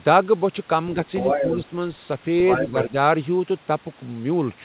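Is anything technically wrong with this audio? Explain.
Yes. A second voice appears under the talker from 1.06 to 1.65 s, about as loud as the speech, and again from 2.49 to 2.84 s, somewhat quieter. This is likely other side's voice leaking through: loudspeaker output reaching the microphone that the echo canceller failed to remove. It is a separate voice overlapping the talker, not a smearing of the talker's own sound.

The talker's level also sinks, by roughly 10 dB from 1.41 to 1.72 s and by about 5 dB from 2.67 to 2.94 s, each dip lasting about 150 ms. This is likely speech suppressed in double talk: with both sides speaking, the canceller turns everything down. These dips overlap the leaked voice, unlike random dropouts, and the level sags rather than falling to silence. In both passages the sound is band-limited at 4 kHz, which points to a G.711 mu-law call path at 64 kbps.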